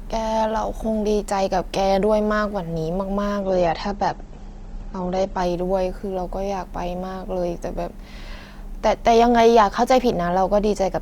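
From 3.41 to 5.41 s the speech suddenly goes dull and a bit watery with no break in the audio. That's an adaptive stream at a lower bitrate: nothing above 8.2 kHz survives, which fits a switch from roughly 64 down to 16 kbit/s Opus.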